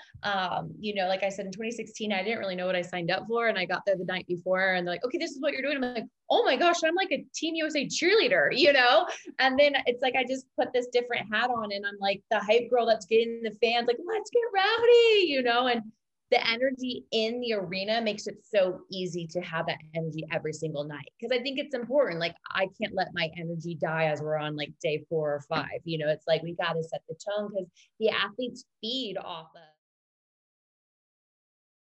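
No technical faults are audible anywhere in the audio.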